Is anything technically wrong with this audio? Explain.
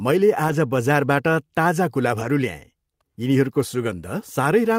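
Yes. The speech has two brief spots of lost packets rebuilt from error correction, at 0.47 to 0.53 s and at 2.19 to 2.25 s. At each, packets went missing, and the decoder filled the hole with the lower-bitrate backup copy carried in the following packet. About 40 ms is affected each time, which fits two lost packets. The sound stays continuous but turns briefly rougher and noisier. Unlike plain concealment, it doesn't smear, fade or drop out.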